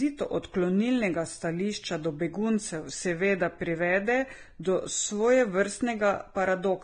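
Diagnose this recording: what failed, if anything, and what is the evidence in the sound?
Vorbis compression at the codec stage is the likely fault, present throughout. The speech stops dead at 9.7 kHz, and the treble below turns hissy and grainy as fine detail becomes noise, suggesting a bitrate near 23 kbps. A low-pass filter would dull the top without roughening it.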